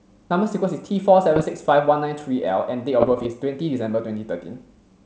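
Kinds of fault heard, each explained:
Bit errors on an ADPCM link: flipped bits upset the decoder's step size and predictor, so each error rings on as pops and rough bursts with brief level jumps, at 1.36–1.46 s and 3.01–3.27 s; unlike packet loss, the sound never drops out.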